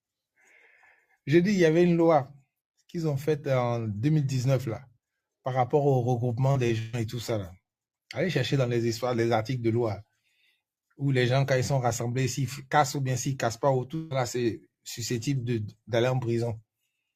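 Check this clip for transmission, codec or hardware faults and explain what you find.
The clip has three kinds of network fault, all clustered in two places.

Short concealed packet loss occurs at 6.51 to 6.57 s and again at 6.67 to 6.71 s. About 40 ms of audio is missing in the first and 20 ms in the second. The decoder never received those fragments in time, so it extended the preceding sound across each gap and then merged back into the real signal. Each one sounds like a quick smear or wobble.

A burst of packet loss follows almost immediately, from 6.79 to 6.95 s. About 140 ms of audio never arrived. The receiver kept the last sound going for the whole gap and let it fade as it continued, so there is no silent hole. What you hear is a held buzz or hiss that sags. The sound then picks up later, with the stretch in between gone.

A long network dropout is the likely cause of the event from 13.95 to 14.13 s. 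About 160 ms of audio is missing. The entire gap is filled with a continuation of the preceding sound that dies away, and no true silence is reached. The sound then resumes past the lost section, so the passage seems to jump forward.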